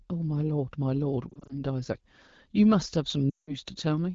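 Lost AMR speech frames at 1.30–1.53 s cause brief warbling dips: the decoder reuses the last good pitch and vocal-tract settings across scattered 20 ms gaps, visible as short smeared notches in the waveform. At 3.29–3.54 s, about 180 ms goes missing, so the sound drops to near silence within two frames. On a spectrogram this shows as frozen, thinning harmonics before recovery.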